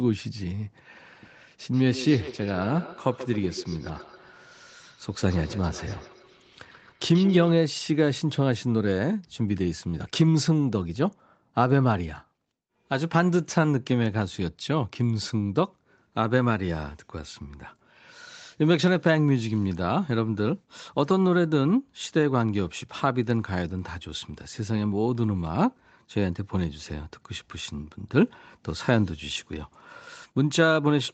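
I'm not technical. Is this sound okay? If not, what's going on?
No. From 1.73 to 7.53 s, the speech comes back as quick, thin, ringing repeats, roughly every 150 milliseconds. This is feedback echo between two devices: two devices in the same room share a call, and one microphone keeps picking up the other's loudspeaker.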